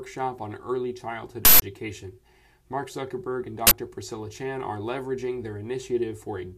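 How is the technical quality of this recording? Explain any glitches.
Two uninitialised buffer bursts spoil it: harsh digital noise at 1.45 s for 170 ms, and again at 3.67 s for 43 ms. Blocks were played before being filled, so leftover memory came out as sound, consistent with roughly 8192- and 2048-sample blocks.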